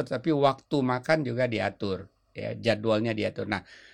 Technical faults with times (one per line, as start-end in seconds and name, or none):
none